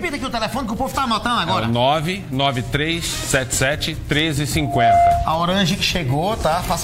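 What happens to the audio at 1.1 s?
Nothing goes wrong at 1.1 s; the audio plays through that moment intact, with no dropout, click or other fault.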